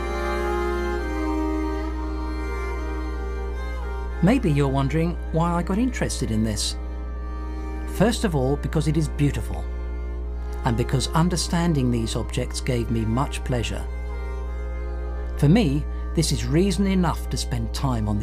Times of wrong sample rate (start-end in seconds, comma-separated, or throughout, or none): none